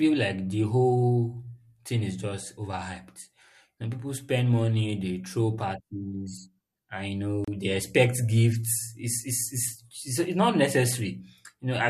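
At 7.44 to 7.48 s the speech drops out for about 32 ms: a gap at a join of encoded pieces. Two separately encoded segments were butted together untrimmed, leaving encoder delay and final-frame padding as a brief silence with smeared edges.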